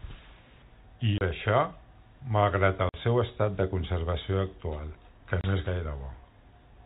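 Hard-edged holes of silence chop the speech at 1.18 s (30 ms), 2.89 s (50 ms) and 5.41 s (30 ms). This is packet loss filled with silence, with gap lengths that fit 10 ms packets, heard over the band-limited G.711 telephone path.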